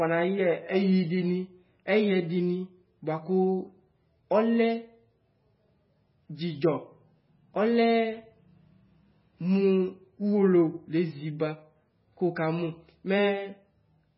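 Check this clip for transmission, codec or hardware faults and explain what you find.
One fault runs throughout. The speech sounds watery and swirly, with nothing above 5.5 kHz and smeared onsets. The likely cause is heavy MP3 compression: starved of bits, the encoder cuts the treble and lets weak frequency lines flicker between frames, which fits roughly 16 kbps.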